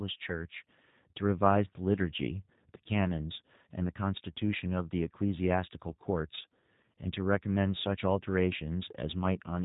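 Throughout, G.729 codec damage is plainly audible: a rough, synthetic quality from pulse-based reconstruction at what sounds like 8 kbit/s, with the spectrogram empty above 3.8 kHz.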